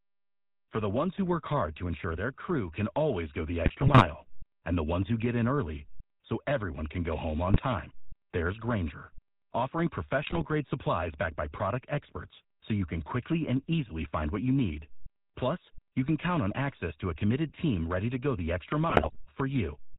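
GSM full-rate codec coding runs throughout, consistent with a 13 kbps stream: the speech is rebuilt from a pulse-driven vocal-tract model, nothing passes above 4 kHz, and the voice sounds buzzy and gravelly. GSM bit errors strike at 3.62–4.05 s, 7.48–7.61 s, 10.22–10.46 s and 18.9–19.17 s, where corrupted filter, pitch and gain values distort the spectrum and level, giving squawks, pops and gargling.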